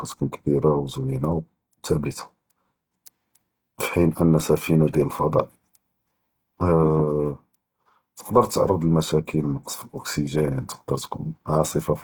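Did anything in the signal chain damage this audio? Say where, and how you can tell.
Yes, at the codec stage: the speech sounds grainy throughout, likely Opus compression starved of bits and filling bands with noise. A spectrogram shows speckled bands up to 20.2 kHz.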